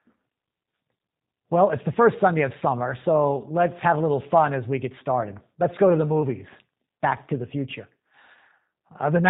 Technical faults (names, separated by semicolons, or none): G.729 codec